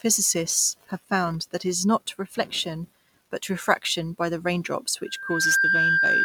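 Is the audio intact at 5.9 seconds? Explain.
No. At 5.9 seconds the speech is overlaid by loudspeaker feedback squeal, which starts at 5.05 s and runs right to the end of the clip. The mic is picking up the speaker it feeds, and at 1.6 kHz the loop gain tops one, so that tone feeds itself. You hear it swell over roughly 0.4 seconds into a steady 1.6 kHz whistle sitting about 5 dB above the speech.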